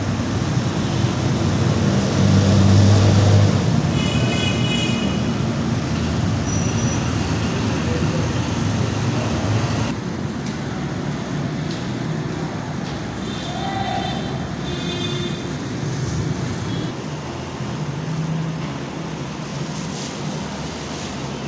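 No faults are audible anywhere in this recording.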